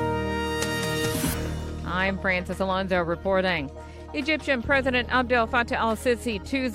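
No technical faults can be heard anywhere in the audio, and the signal stays steady and intact throughout.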